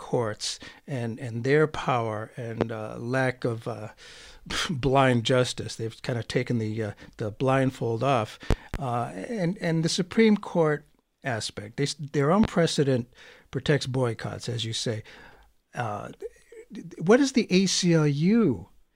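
A speech clip with three loud pops over the talking: 2.61–2.65 s after "and and their power", a double pop at 8.51–8.77 s after "uh the blindfold off", and 12.44–12.47 s before "precedent protects boycotts as". They peak around 15–20 dB above the speech, likely from a voltage spike such as static or a switch.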